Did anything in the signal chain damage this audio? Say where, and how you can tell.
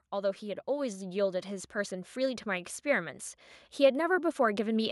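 Yes. From 0.12 s to 4.87 s the speech and the background swell upward together, climbing about 9 dB. That is automatic gain rising in the call processing: the gain control judged the input too quiet and kept raising its gain gradually across the whole passage.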